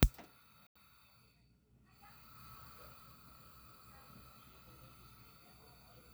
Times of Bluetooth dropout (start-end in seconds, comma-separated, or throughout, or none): 0.67-0.76